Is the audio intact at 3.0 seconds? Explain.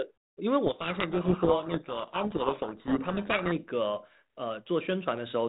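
No. From 0.66 to 3.61 s a codec payload misread reverses the bit order of the G.726 code words, so the decoder buries the speech in harsh distortion.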